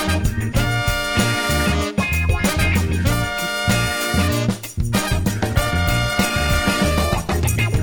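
Right up to 5.12 s the sound is full and clean, and then a call bitrate drop kicks in and runs until about 7.73 s, basically to the end. The connection's bandwidth estimate fell, so the encoder got squeezed onto far fewer bits. You can hear the highs get lopped off and the texture go coarse and a bit watery for about 2.5 seconds, which fits a fall from roughly 96 kbps down to around 18 kbps.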